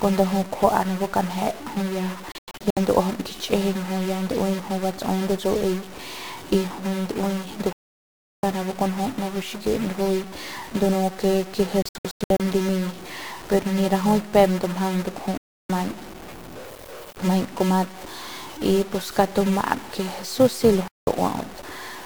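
Throughout the speech, a distortion sits on the sound and noise fills the pauses. A stuck bit is the likely cause. A filter restarted on every block adds a steady 375 Hz buzz, which fits 128-sample blocks, and the buzz tracks the level.

Digital broadcast dropouts mute the signal five times. From 2.32 to 2.77 s there are several short holes. From 7.73 to 8.44 s there is one long silence. From 11.82 to 12.40 s there are more scattered holes. Brief mutes follow at 15.38 to 15.70 s and 20.88 to 21.08 s.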